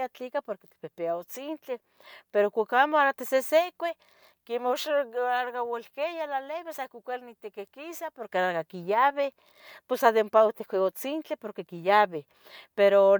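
A speech recording with no technical fault to report. Nothing in it needs a time or a cause.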